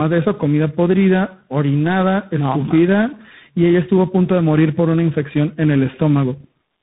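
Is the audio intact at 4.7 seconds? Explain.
No. At 4.7 seconds, as throughout the clip, the speech carries tandem speech coding. It sounds rough, muffled and warbly, with nothing above 3.8 kHz, which fits about three lossy coders in a row ending in CVSD, each re-encoding the previous one's damage.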